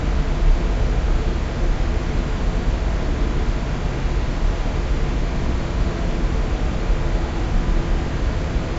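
Nothing stood out on listening to this recording of sounds.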